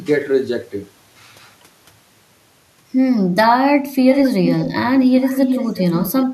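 Speech with echo leak at 4.12–4.22, 4.45–4.73 and 5.16–6.26 s: a copy delayed 335 ms, roughly 5–10 dB down, likely from a far-end loudspeaker's incomplete echo cancellation.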